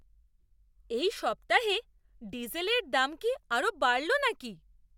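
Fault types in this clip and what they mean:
No faults to report: the speech path shows no dropouts, clipping, glitches or other defects worth logging.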